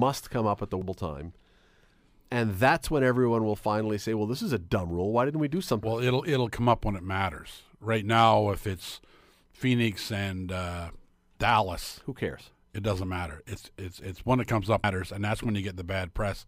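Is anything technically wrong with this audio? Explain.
Yes, there's damaged data in the compressed stream, showing up three times as brief glitches. The first lands at 0.82 s, right after "come up at the". The second hits at 5.83 s, between "didn't we do" and "well it". The third is at 14.84 s, after "it's it's one that". At each spot a stretch of the encoded stream was corrupted, so the decoder couldn't parse those frames, lost its place and had to hunt for the next valid header. You hear that as a short chirp, squawk, click or hole in the speech.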